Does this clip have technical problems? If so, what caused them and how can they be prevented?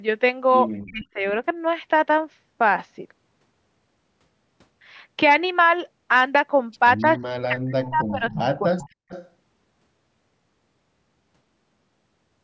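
Yes. Speech suppressed in double talk: at 0.83–1.24, 7.3–8.45 and 8.61–8.96 s the speech dips by roughly 40 dB or breaks into pieces. It shows as sudden gaps in the waveform and dark holes across the spectrogram. The likely cause is an echo canceller that could not tell its own talker from loudspeaker echo while both sides spoke, so it attenuated everything. Better double-talk detection and a less aggressive suppressor would prevent it.

Echo leak: a faint copy of the speech returns 263 ms late at 6.98–7.19 s, about 35 dB down. It comes back stronger, about 20 dB down, at 7.83–8.11, 8.32–8.37, 8.81–8.89 and 9.09–9.3 s. On a spectrogram it appears as ghost harmonics trailing the original. It is likely residual loudspeaker pickup that the far side's canceller failed to remove. Using a headset or giving the far end's canceller a longer tail and better convergence would prevent it.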